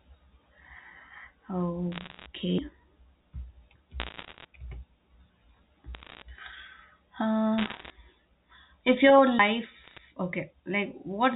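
Speech heard over a G.711 telephone channel, so nothing above 4 kHz comes through. Bit errors on a digital phone line cause bursts of sharp ticks and crackle at 1.92–2.26 s, 4.0–4.45 s, 5.95–6.22 s, 7.58–7.9 s and 9.84–9.99 s. The flipped bits corrupt single samples, at a rate of around one percent, rising to about 1.5 percent at 7.58 s and falling to about 0.4 percent at 9.84 s. There are two CD skips, at 2.58 s and 9.39 s. Each is a tick and a brief mute, then the sound jumps as the laser lands on another turn of the spiral.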